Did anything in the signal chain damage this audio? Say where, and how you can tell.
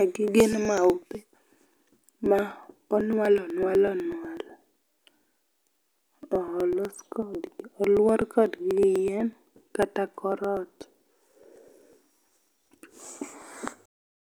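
Yes. The damage is at the driver or USB stage: periodic USB or driver dropouts. From 0.16 s to 14.16 s the speech carries a steady train of ticks, one every 0.124 s, about a hundred in all. Each marks roughly a millisecond of audio skipped outright. Nothing fills the gap, so the waveform jumps and clicks. The strict regularity points to a background task blocking the bus or driver on a fixed schedule.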